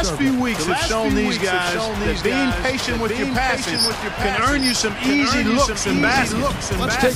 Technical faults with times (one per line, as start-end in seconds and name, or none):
0.00-7.16 doubled audio track